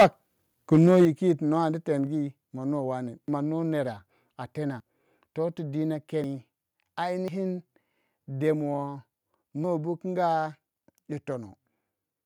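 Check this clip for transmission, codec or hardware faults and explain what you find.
The clip shows three kinds of fault in the speech path.

Microphone overload at 0.0–0.06 s and 0.73–1.05 s: peaks are flattened at roughly 10 dB and then about 4 dB over full scale, likely from excessive input gain. The result is a harsh crackle on the loudest sounds.

Microphone volume stepped down at 1.05 s and 2.07 s: speech and background drop abruptly by about 6 dB and then about 2 dB, likely the call software cutting input gain after the clipping, the first step right as it ends.

Dropped buffer (overrun) at 3.28, 4.8 (just before "toh tu"), 6.24, 7.28 and 9.64 s: each is an abrupt skip of roughly 40 to 70 ms with no gap. The likely cause is samples being overwritten before the program read them.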